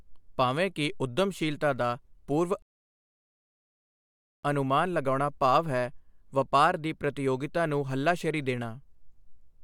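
At 2.62 s the speech stops dead and stays silent until 4.44 s, a rebuffering stall. The player exhausted its downloaded audio and paused for about 1.81 s while more data arrived, then picked up at exactly the point it had left off, so nothing is missing but the clip runs longer. On a waveform this is a flat, empty gap with abrupt edges, and on a spectrogram a clean vertical band of black.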